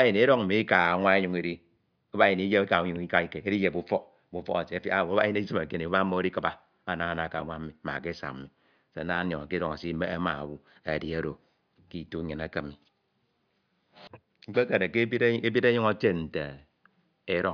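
No technical faults are audible.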